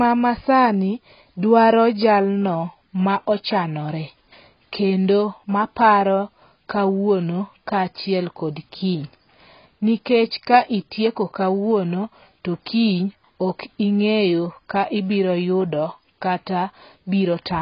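From start to finish the speech is dull and smeared, with a watery, warbling edge on sustained sounds. Nothing reaches above 5 kHz, so a spectrogram shows a flat ceiling there with patchy holes below it. This heavy damage is likely AAC compression, and fits a very low bitrate of around 16 kbps.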